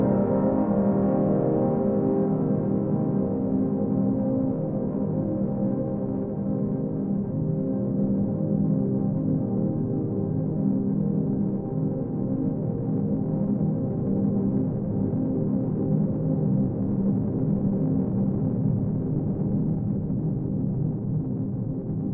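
A recording of everyday sounds, with nothing technically wrong to report. No fault can be heard at any point in the audio.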